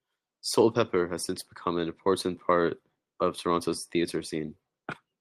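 No technical faults are audible.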